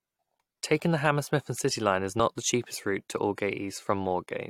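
At 2.18 s, just before "the cheapest route to", the speech jumps forward by what sounds like a single compressed frame, about 20 ms, consistent with a 23.2 ms frame. This is skipped compressed frames: the decoder never played the frame, so the audio resumes further on. The same skip recurs at 3.53 s, just after "the cheapest route to".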